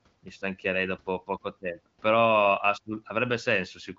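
No technical faults can be heard in this speech recording. It has passed through the AMR wideband (HD Voice) codec at a rate high enough to leave the speech clear, with at most faint coding damage and nothing above about 7.6 kHz.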